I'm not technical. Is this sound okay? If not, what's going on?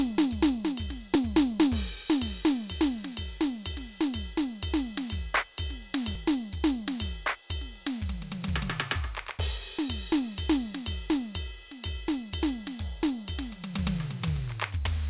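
No. Dropped buffer (overrun), at 6.15 s and 8.70 s: the music jumps ahead, likely because the computer briefly fell behind and lost a tiny slice of sound.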